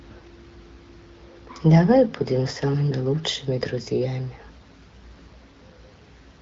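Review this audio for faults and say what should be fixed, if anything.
Nothing here needs fixing. The speech carries the wideband character of the AMR wideband (HD Voice) codec, with content reaching up to about 7 kHz, and its light coding fits a rate around 12.65 kbit/s.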